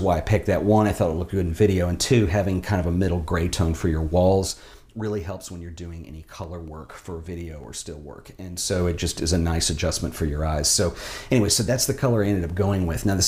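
From 4.32 to 4.72 s the level drops by about 10 dB. The drop comes as zipper noise. The gain moves in 1 dB steps, around thirty a second, with no smoothing between them. Each jump puts a small click into the waveform. Together the clicks form a fast ticking, a zip, laid over the sound while the level falls.

From 6.44 to 7.64 s, CD scratch ticks appear: six of them, about five a second. The rate matches one tick per turn of the disc. A blemish wipes out more data than error correction can repair. The player patches or mutes the damaged samples, leaving tiny gaps of a couple of milliseconds at most. A second run follows from 11.78 to 12.74 s, with five ticks. The longest gap there is a few milliseconds.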